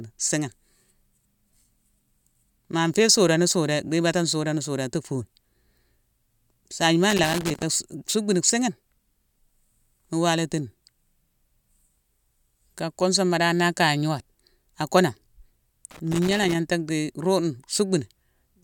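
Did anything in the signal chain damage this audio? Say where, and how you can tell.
Yes, the analogue wiring. Loose connector crackle appears twice, from 7.10 to 7.63 s and from 15.91 to 16.55 s. Each is an irregular burst of scratching over the speech. A worn contact is making and breaking as it moves, chopping the signal.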